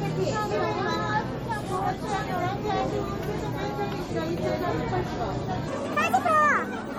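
From the start, the whole clip carries plainly audible MP3 compression. The sound is watery and swirly, with metallic chirps on bright detail and smeared attacks. It likely comes from an encoder starved of bits, which fits a low bitrate around 48 kbps. Nothing is heard above 21.4 kHz.

At 5.68 s a section at the wrong speed begins and runs to the end. The audio plays 1.72 times too fast, likely from being fitted to the wrong clock. Pitch jumps up by roughly ten semitones, and everything sounds high and hurried.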